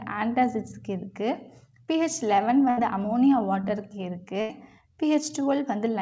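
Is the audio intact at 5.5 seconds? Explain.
Yes, the audio is intact at 5.5 seconds, with only the ordinary character of a WebRTC call path, whose G.722 coding leaves nothing above 8 kHz.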